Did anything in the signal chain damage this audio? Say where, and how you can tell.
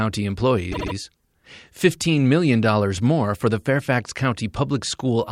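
Yes: repeated frames at 0.71 to 0.93 s, a codec-stage fault. A 72 ms compressed block replays three extra times, causing a stutter and adding 216 ms.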